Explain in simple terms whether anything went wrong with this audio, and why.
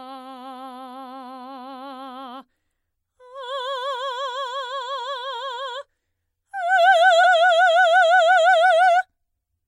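At 7.23 s the music jumps ahead by about a tenth of a second. This is compressed frames skipped. A few damaged or missing chunks were never played.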